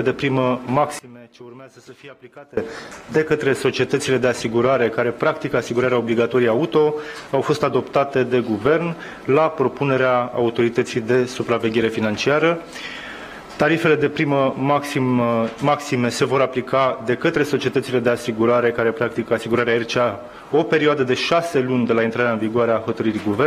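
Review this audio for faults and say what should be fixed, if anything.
One channel inverted, from 0.99 to 2.57 s: the sound drops by about 22 dB, leaving only a faint residue of what differs between left and right. This is likely a polarity flip on one side of the stereo pair, so material common to both channels cancels when summed to mono, and centred content and low end all but disappear until normal polarity returns at 2.57 s. Prevent it by checking phase correlation and a mono fold-down on every edit or processing stage before export.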